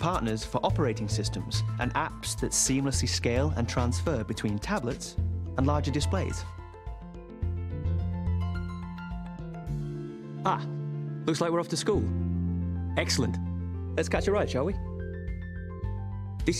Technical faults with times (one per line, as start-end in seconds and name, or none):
none